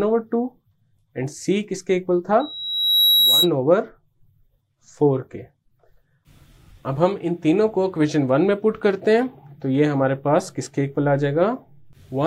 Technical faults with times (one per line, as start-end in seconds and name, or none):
2.39-3.50 loudspeaker feedback squeal